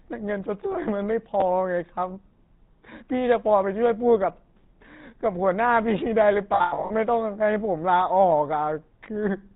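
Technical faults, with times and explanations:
Throughout: GSM full-rate codec. The whole clip has that buzzy, gravelly edge and nothing above 4 kHz, which fits the original 13 kbps GSM coder. It models the vocal tract and drives it with sparse, regularly spaced pulses, so the damage is plainly audible everywhere.
6.54 to 6.91 s: lost GSM frames. About 280 ms of audio is missing, scattered over 360 ms, with the longest gap around a tenth of a second. Each hole is filled by repeating the settings of the last good frame, which produces a rough, metallic ring.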